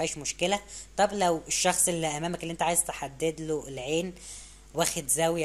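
No technical faults can be heard anywhere in this audio.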